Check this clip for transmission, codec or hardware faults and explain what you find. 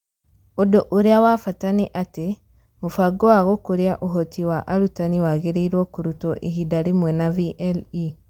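No faults detected.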